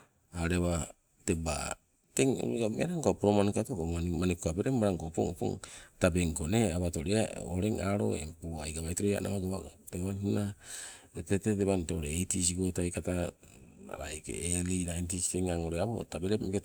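Speech recording; no technical faults can be heard.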